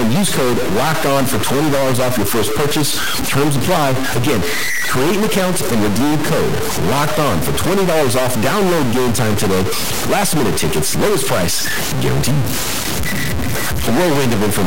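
From start to finish the speech carries harsh, buzzy distortion, and the pauses are filled with loud noise rather than silence. The likely cause is a stuck bit, a fairly high-order one whose fixed error sits around -15 dBFS, corrupting roughly half of all samples.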